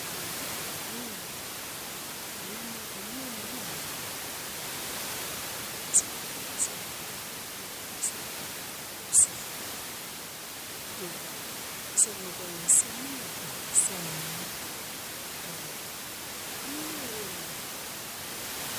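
No technical faults can be heard in this speech recording; the only thing beneath it is the room's own background noise, sitting about 16 dB below the speech, which belongs to the recording space rather than to the system.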